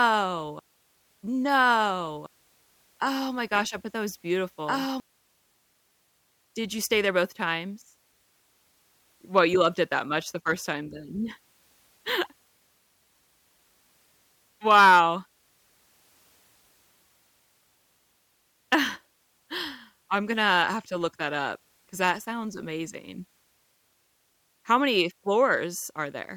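Right from the start and through to about 5.0 s, there's a doubled audio track: the speech is heard twice, with a second full-band copy trailing roughly a second and a half behind at about the same level. It's already running when the clip begins, then cuts off abruptly at 5.0 s. There's no decay or room colour on the copy, so it's likely the same signal captured again through a slower path.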